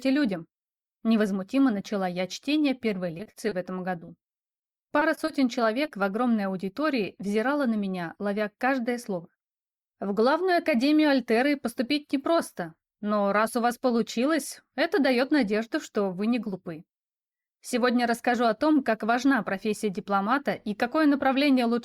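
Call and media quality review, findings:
Repeated packet loss (robotic sound), 3.17 to 3.53 s: choppy texture with pieces missing. Roughly a fifth of the span is concealment, holes about 20 ms each, which points to four lost 20 ms packets. Jitter buffer/decoder concealment extending prior sound across each gap.

Repeated packet loss (robotic sound), 3.99 to 5.29 s: same chop, longer run. About 15% concealed, gaps up to 20 ms, consistent with ten dropped or late packets. Network loss; receiver repeatedly patching holes before the next arrives.

Short concealed packet loss, 5.85 s: single brief smear or wobble, about 20 ms filled in. One late or missing packet at the decoder. Gap bridged by continuing the preceding sound, then cross-faded back into received audio. Brief onsets may drop out.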